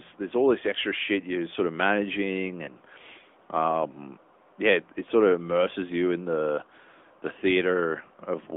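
A speech recording with a thin, boxy, telephone-like sound: the voice is confined to roughly 250 Hz to 3.5 kHz, with no air or sibilant sparkle above that, and it carries a plainly audible buzzy, synthetic edge. That is the signature of the AMR narrowband mobile codec, which samples at 8 kHz and rebuilds speech from a vocal-tract model excited by a handful of pulses per subframe. The degree of synthetic coloration fits a mid-rate mode around 10.2 kbps. At about 2.66 to 2.70 s there is a brief dip and warble lasting roughly 20 ms before the voice resumes rough for a moment. This is a case of lost AMR speech frames, and the brevity points to a single frame failing its checksum. The decoder filled the gap by repeating the last good pitch and vocal-tract settings at reduced gain, which produces that short smeared wobble rather than a clean dropout.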